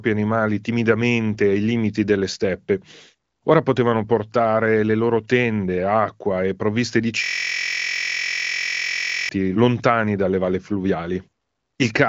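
At 7.24 s, right after "acqua e provviste di", the speech locks into a system hang loop that lasts until 9.29 s. The computer or driver stalled, but the sound hardware kept replaying the same stretch of its ring buffer. A 23.22 ms slice repeats close to ninety times, which fits a 1024-sample buffer. Because the slice is so short, it fuses into a steady buzz at 43.1 Hz. Speech resumes with "lontani dalle valle", still carrying the clear, band-limited sound of the AMR wideband codec.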